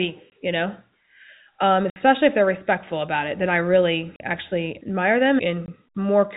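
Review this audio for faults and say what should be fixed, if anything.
Packet loss filled with silence breaks the speech in four places. Gaps fall at 0.3 s before "you know", at 1.9 to 1.96 s before "if they're respectful about", at 4.16 to 4.2 s, and at 5.66 s after "I really actually admire". The holes run 20, 60, 40 and 20 ms, consistent with 20 ms packets. Each lost packet was replaced by dead silence, so the cuts have hard edges. To prevent it, add packet loss concealment and a jitter buffer on the narrowband G.711 link.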